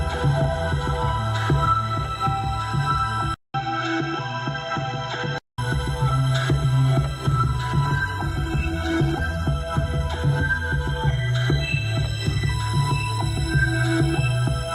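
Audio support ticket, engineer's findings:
Input switched to a poorer device, 3.34 to 5.58 s: sound turns dull with a different background. A 200 ms dropout at the switch, a gap in the waveform. Spectrogram shows nothing above 7.6 kHz, a new noise floor roughly 30 dB down, level a few dB lower. Likely a capture-device or headset-profile change.

Call bitrate drop, 7.86 to 9.55 s: encoder bitrate falls from 64 to 14 kbps, bottoming out for 1.63 s. Sound turns rough and watery. Spectrogram shows blocky, smeared texture. Component is the encoder responding to a reduced bandwidth estimate.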